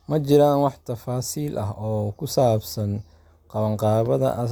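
No technical fault can be heard in this speech recording, and the signal stays steady and intact throughout.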